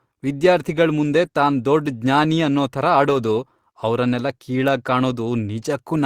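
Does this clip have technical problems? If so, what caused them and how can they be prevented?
Yes. Packets went missing in transit and the decoder rebuilt them from the low-bitrate copies carried in the following packets. This is a lost packet rebuilt from error correction, so there is no gap, but those stretches sound briefly rougher and noisier. It happens at 0.43–0.45 s, just before "ಮುಂದೆ ತಾನ್ ದೊಡ್ಡ್ ಜ್ಞಾನಿ"; at 1.25–1.27 s, before "ತಾನ್ ದೊಡ್ಡ್ ಜ್ಞಾನಿ ಅನ್ನೋ"; and at 3.05–3.15 s, after "ದೊಡ್ಡ್ ಜ್ಞಾನಿ ಅನ್ನೋ ಥರ". The first two are single 20 ms frames, and the last is a 60 ms stretch that fits three consecutive lost packets. A more stable network path with less congestion, or a larger jitter buffer to absorb late packets, would reduce these losses.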